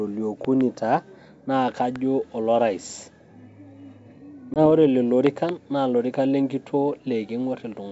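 A speech recording with two kinds of fault. There are loud pops sitting around 15 dB above the speech: a pair between 0.45 and 0.63 s, a single one at 1.96 to 1.98 s, and another pair between 5.27 and 5.51 s, with the speech running on underneath. They're likely electrical spikes from a plug, switch or static discharge. At 4.54 s there's packet loss on an ADPCM call: a hard-edged gap of about 20 ms, roughly one packet, and then the speech comes back a bit roughened until the decoder's predictor catches up again by about 4.67 s. That coding sounds like G.722 wideband at around 64 kbit/s.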